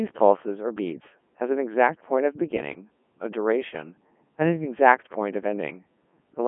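From start to end the speech sounds robotic and buzzy, with a metallic, synthetic edge instead of a natural voice. The band is squeezed to roughly 200 Hz to 3.4 kHz, and nothing at all comes through above 3.5 kHz. This is Codec 2 vocoder damage, and it is heavy: the waveform itself is not carried. Only pitch, voicing, energy and a coarse spectral shape get through, and the decoder rebuilds the voice from sine waves, a sound that fits its top rate of about 3.2 kbit/s.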